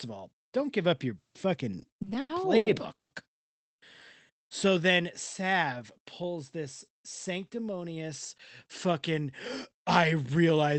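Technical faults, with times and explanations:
1.79–3.12 s, repeated stalls (stutter): the speech drags and hiccups through eleven short holds, the longest 160 ms, adding about 430 ms without losing anything. Late packets repeatedly emptied the jitter buffer, so the receiver stretched and faded the last sound until playback resumed.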